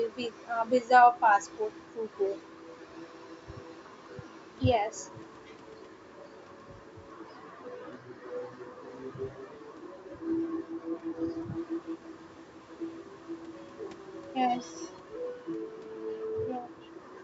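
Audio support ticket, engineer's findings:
No faults found; call microphone processing behaving as expected.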